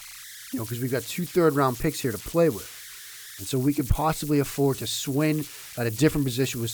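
Speech throughout carries converter idle tones: a whistle sitting around 2 kHz, clearest in the pauses, with a grainy texture under the quieter passages, at about 16 dB below the signal. An undithered delta-sigma converter, given very small input, settles into repeating bit patterns whose rate sets that pitch. On a spectrogram this shows as a thin horizontal line near 2 kHz running across the gaps, and the near-silent stretches of the waveform look textured rather than flat.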